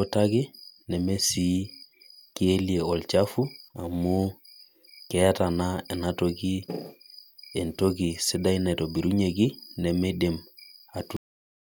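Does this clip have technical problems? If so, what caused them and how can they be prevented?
Yes. A cut-off end: at 11.17 s the speech stops mid-sound and drops straight to digital silence with no decay for the remaining 0.59 s, because the final buffers were never written or played. Prevention: flush and finalise all pending buffers before closing the recording.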